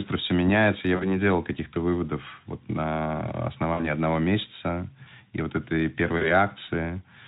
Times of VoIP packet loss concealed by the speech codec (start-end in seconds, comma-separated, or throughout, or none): 0.96-1.20, 3.74-3.91, 6.18-6.29